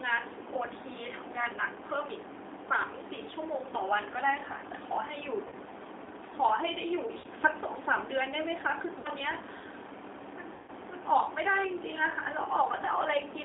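The speech has been squeezed through the G.729 codec at 8 kbit/s, rebuilt from a filter, a pitch predictor and a few pulses per frame, in a 300 Hz to 3.6 kHz line band. The result is thin, rough and noticeably synthetic throughout.

VoIP packet loss concealed by the speech codec follows in four places: 5.48 to 5.54 s (40 ms missing), 7.18 to 7.26 s (60 ms), 8.99 to 9.09 s (60 ms), and 10.54 to 10.70 s (140 ms, which fits about seven lost 20 ms packets). Each time the decoder stretches the last sound into a fading buzzy tone or coloured noise, and the speech stays weak briefly after it returns.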